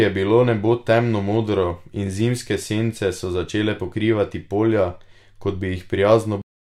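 The final buffers of the recording were never written out, producing a cut-off end at 6.42 s. The speech stops abruptly partway through a sound and drops straight into digital silence with no natural decay, leaving the last third of a second empty.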